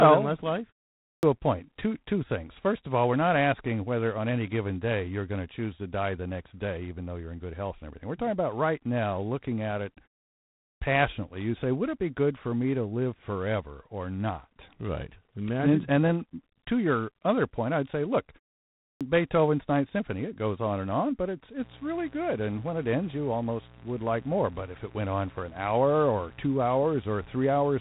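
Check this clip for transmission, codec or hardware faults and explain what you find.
Three faults are audible in this speech: codec damage throughout, clipped word onsets after three pauses, and a mains buzz near the end.

G.726 ADPCM, throughout: a harsh, rasping hiss rides on the speech, with nothing above 3.9 kHz. It fits 24 kbit/s coding, too few bits per sample.

Clipped start after a pause, at 0.99 s after "well than less life" and before "a point", at 10.56 s, and at 18.78 s after "point I'd say look": about 0.23 to 0.25 s of each onset is missing. The output device sleeps in silence and wakes late.

Mains buzz, from 21.6 s to the end, after "and on but it's": a steady, raspy 60 Hz buzz roughly 25 dB below the speech. It comes from switching spikes leaking in twice per mains cycle.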